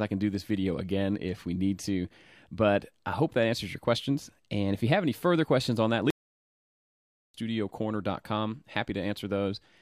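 At 6.10 s the sound cuts off abruptly and stays silent until 7.34 s, a gap of about 1.24 s: a playback stall. The player most likely ran short of data or had its output thread held up, so nothing reached the output until it caught up. On a waveform the trace drops to a flat line with a hard edge at each end, and a spectrogram shows a clean vertical band of empty space across all frequencies.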